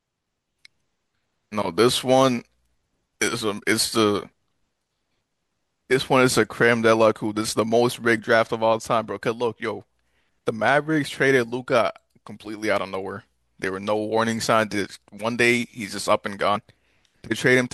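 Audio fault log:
16.55 s: compressed frames skipped. The decoder never output a short run of compressed speech frames, either because they were missing from the stream or because it rejected them as damaged. The gap sounds like about two 24 ms frames, so roughly 50 ms of speech is lost and the audio jumps forward at once.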